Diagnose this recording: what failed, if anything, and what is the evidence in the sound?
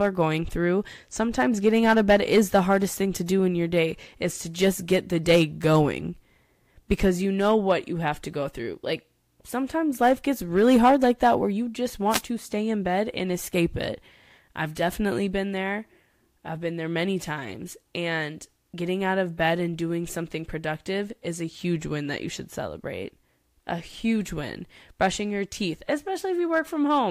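A wireless microphone noise hit occurs in the analogue radio link ahead of the converter, from 12.09 to 12.22 s, between "that where you just" and "to stay in bed". For about 130 ms a swish of static is heard over the speech. The FM carrier faded as reflected paths cancelled, so receiver noise rose over the signal. A spectrogram shows a brief broadband vertical smear of hiss, and the waveform shows a noisy burst blurring the speech envelope.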